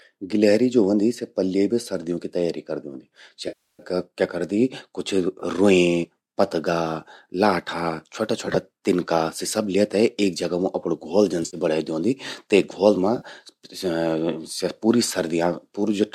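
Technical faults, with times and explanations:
3.48–3.83 s, 5.40–5.43 s, 8.46–8.56 s, 11.43–11.57 s (just before "बणें द्योंदि ते") and 13.18–13.25 s, AAC frame loss with concealment: smeared, noisy, phasey patches, with the third and fourth broken up in bursts. The 310 ms gap at 3.48 s decays toward silence and fades back in. The decoder is rebuilding missing frames from the last good spectrum.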